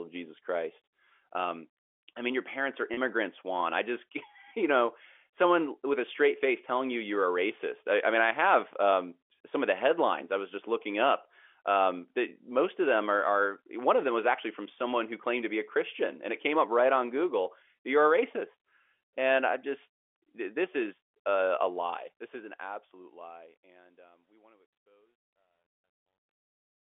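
At 2.94 s, just after "mean your parents are" and before "juan i just", the clip suffers packet loss with pitch repetition: about 30 ms, consistent with a single lost packet, was filled by looping the last pitch period. It sounds like a brief buzzy hold, and a spectrogram shows evenly repeated harmonic striations.

From 21.71 s, after "this is a a", truncation distortion on a fade sets in as the smooth fade-out is rendered at roughly 12-bit resolution without dither. From 24.1 s to the end at 26.82 s the tail turns gritty. The waveform shows stair-stepped, near-square blocks, and the speech sits in the narrow 300 Hz to 3.4 kHz telephone band of the G.711 coding.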